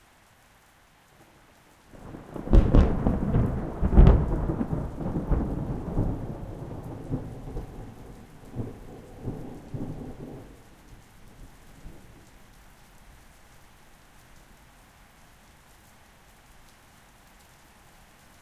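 Nothing stood out as a technical problem on listening to these sounds.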